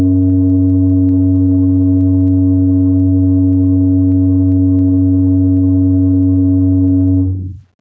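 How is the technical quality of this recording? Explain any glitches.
The music recording suffers from gain pumping, heard across the whole clip. Gain pumping runs throughout: the input was likely set far too hot, so a fast limiter clamps down on each loud passage, swinging the level by around 10 dB. Loud and soft parts sit closer in level, leaving the music squashed. The call-style microphone path trims the deepest bass and carries nothing above 8 kHz.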